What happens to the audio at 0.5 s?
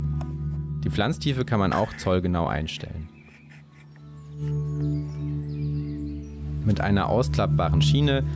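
At 0.5 s the audio is in the middle of gain pumping, which runs through the whole clip: the gain ducks by about 5 dB under each loud sound, likely from gain set far too high with a fast limiter pulling it back. Unlike a noise gate, it never cuts the sound to silence; the level rides up and down.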